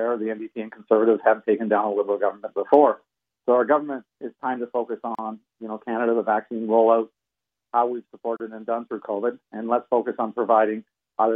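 At 5.15 s and again at 8.37 s the sound halts for about 36 ms and 34 ms, then carries on exactly where it stopped. Each is a gap at a join of encoded pieces: separately encoded segments were spliced without trimming the encoder's start-up delay and final-frame padding, so that silence stays in. Unlike a dropout, nothing is missing; the edges are smeared by the codec.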